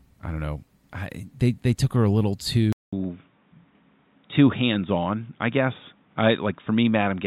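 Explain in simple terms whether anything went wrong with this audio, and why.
At 2.73 s, right after "took her a little", the speech drops out for about 0.2 s and then returns sounding duller and boxier, and it stays that way to the end. Nothing above 3.8 kHz gets through after that point, so the crisp upper detail is gone. A faint new background noise appears, while the loudness stays about the same. This is an input switched to a poorer device, likely a change to a lower-quality microphone partway through recording.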